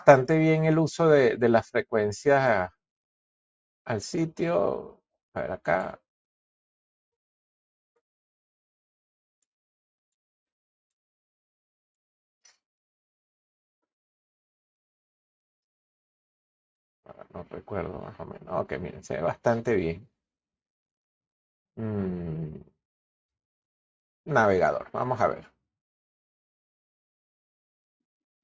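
No faults found; the audio shows only ordinary call microphone processing, with the lowest bass trimmed and nothing above 8 kHz.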